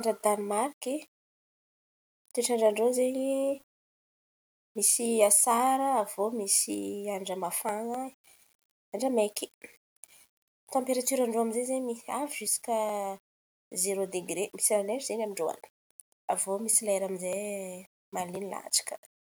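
All the way through, the speech has a grainy edge that tracks the voice, with quiet tails sputtering instead of fading. That's low bit depth without dither, likely rounded to about 8 bits, with the error sitting roughly 35 dB under the signal.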